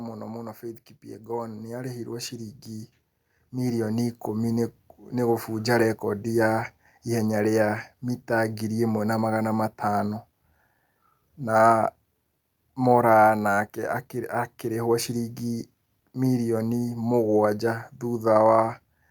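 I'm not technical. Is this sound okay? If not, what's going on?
No. From about 0.61 to 5.57 seconds the automatic gain is rising: the recorder decided the input was too quiet and slowly turned itself up. Unlike someone simply moving closer to the microphone, the background noise swells along with the voice.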